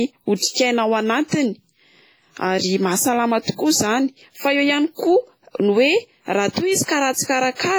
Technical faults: WMA compression; pre-echo

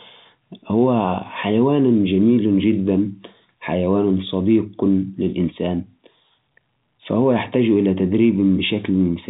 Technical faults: none

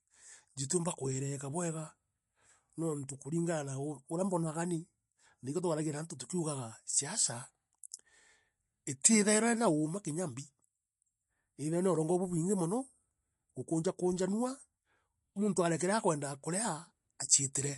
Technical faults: MP3 compression

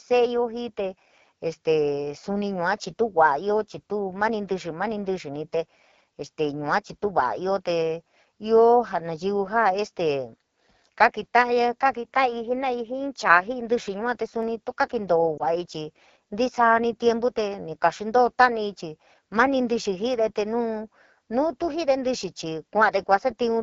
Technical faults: AMR wideband (HD Voice) codec; dropped samples; lost AMR speech frames

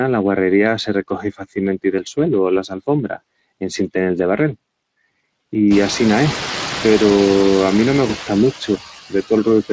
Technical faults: noise suppressor artifacts; Speex codec; speech cut by the noise suppressor; VoIP packet loss concealed by the speech codec

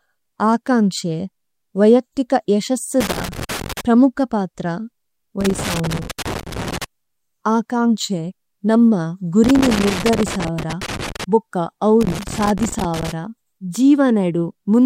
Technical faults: loose connector crackle

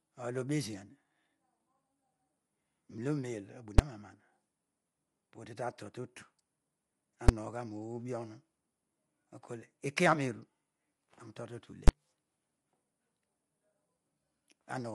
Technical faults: low-delay AAC compression; invalid numbers at full scale

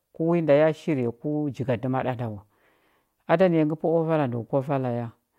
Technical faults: clock slip clicks

